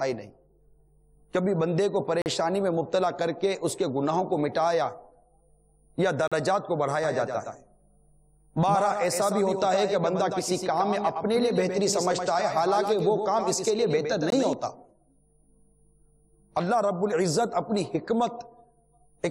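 At 2.22 to 2.26 s, 6.28 to 6.32 s and again at 14.30 s, there's a gap between stream segments: hard-edged silent holes of about 40, 40 and 18 ms, consistent with 4-second segments.

From 7.04 to 14.53 s, a doubled audio track trails about a tenth of a second behind, roughly 5 dB down, dry, cutting in and out abruptly. It's likely a second capture path or an out-of-step edit.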